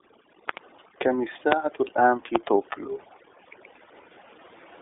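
Across the whole recording, overdone noise removal has been applied: a noise reduction stage set far too hard mutes individual frequency bands wherever they sit close to its noise estimate, so faint parts of the speech disappear along with the noise. The background drops and breaks up into twinkling specks.

The speech also passes through the iLBC codec for its full length, coding each 30 ms frame on its own at a rate that fits its 13.33 kbps mode. Nothing above 3.8 kHz survives and the band sits roughly between 300 Hz and 3.6 kHz, so the voice sounds narrow, with plainly audible rough, synthetic coding damage.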